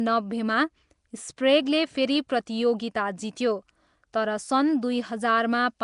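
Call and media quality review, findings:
Rough, hissy halo and smeared, underwater quality on speech, throughout. Plainly audible. Likely Nellymoser compression (Nellymoser Asao, Flash mic codec). Fixed coarse bit allocation per block, weak bands zeroed and noise-filled. Consistent with a 44 kbps stream.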